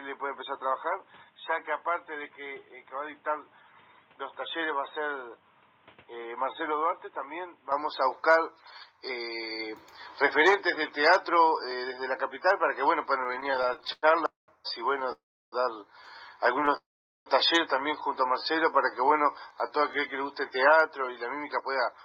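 From the start to 7.72 s the audio is dull and boxy. The level sits about 10 dB lower than later in the clip. A new background noise runs roughly 30 dB under the signal. At 7.72 s the sound opens up again, with no silence at the change. This points to a likely input switched to a poorer device, one with a narrower band and its own noise.

From 13.21 s to 15.10 s there are repeated stalls, a stutter. The audio halts 24 times. Each time the last sound is held and stretched until the flow resumes. The fills add up to 509 ms, about a quarter of the span. The longest lasts 194 ms. Nothing is lost. The audio drags and jerks because late packets kept draining the jitter buffer.

Two call audio freezes follow, likely from packets held up in transit. The first runs from 15.12 s to 15.54 s. It fills 400 ms, and 320 ms of that fades to silence. The second runs from 16.76 s to 17.28 s. It fills 497 ms, with 440 ms silent. 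Each time the last sound trails off, then the audio picks up where it stopped. A gap is inserted, and nothing is missing.

From 18.39 s to 19.92 s there is a jitter buffer slow-down. The receiver repeated single pitch periods and bits of pauses to rebuild its reserve. About 173 ms was added. Playback runs at 89% speed, with the pitch unchanged. Sounds are drawn out and sluggish.

From 21.43 s to 22.03 s there is a jitter buffer speed-up. The buffer held more than its target. The receiver cut short pieces, around 50 ms in all. Playback runs at 108% speed at the same pitch. The audio sounds hurried.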